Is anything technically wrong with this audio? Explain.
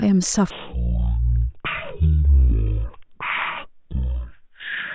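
Yes. From 0.51 s to the end at 4.94 s, a wrong sample rate makes the speech run at one third speed and 19 semitones lower, which fits 48 kHz audio played at 16 kHz unconverted. It sounds deep and dragging. Spectrogram harmonics crowd downward, and waveform cycles look stretched threefold.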